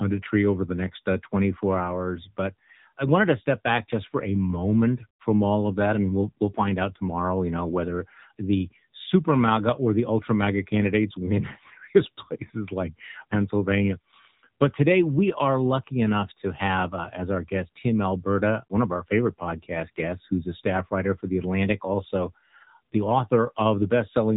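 From start to finish, the speech carries the sound of the AMR narrowband mobile codec. Nothing above about 3.8 kHz survives, so sibilants lose their edge and the top end is gone. The codec rebuilds the voice from a vocal-tract model fed by a few pulses per short frame. Too few bits leave it plainly damaged: buzzy, thin and synthetic. The degree of damage fits one of the middle AMR-NB modes, near 8 kbps.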